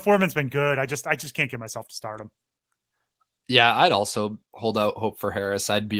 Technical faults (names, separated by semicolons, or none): none